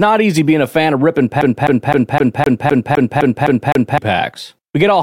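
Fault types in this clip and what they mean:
CD stuck on one turn: from 1.41 to 3.98 s, right after "a fan of ripping", the speech locks into a loop of 256 ms that plays ten times, each restart marked by a brief mute as the scratched disc throws the laser back a track every revolution, giving a rapid, even stutter.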